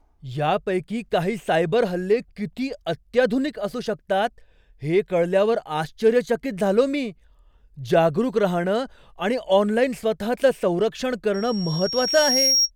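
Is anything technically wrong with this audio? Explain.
Yes. From 11.34 to 12.71 s, after "स्वतःचं संरक्षण", loudspeaker feedback squeal appears. The microphone re-amplifies its own loudspeaker. A 5.6 kHz tone swells over about a second, ending roughly 5 dB above the speech.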